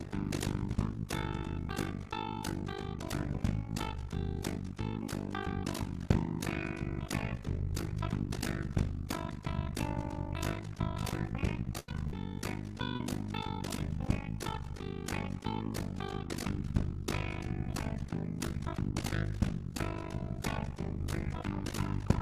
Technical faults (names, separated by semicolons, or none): overlap-add ripple; burst of packet loss; short concealed packet loss